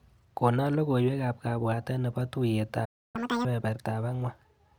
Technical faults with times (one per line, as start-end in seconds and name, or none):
2.84-3.16 playback stall
3.16-3.45 catch-up at higher speed